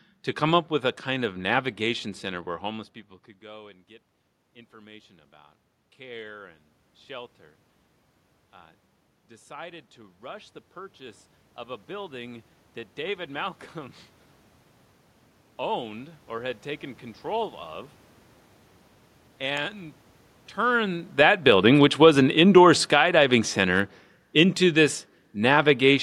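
From 8.52 s to 14.03 s you get the automatic gain rising. The gain control decided the input was too quiet and crept its gain up by about 8 dB over those five-and-a-half seconds. Because the boost is applied to everything coming in, the room noise climbs right along with the speech, so it sounds like the whole scene swells rather than the talker getting closer.

The opposite happens from 20.67 s to 25.98 s, with the automatic gain falling. Just before this, around 20.5 s, the talker moves relative to the mic. The gain control pulls back by about 9 dB over roughly five seconds. The speech and the room noise sink together, which gives it away as gain riding rather than the talker moving again.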